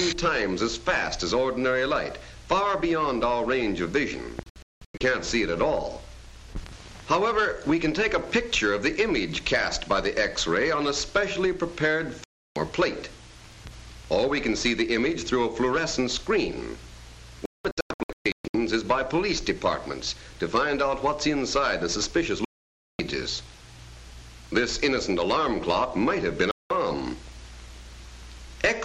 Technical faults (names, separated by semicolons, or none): digital broadcast dropout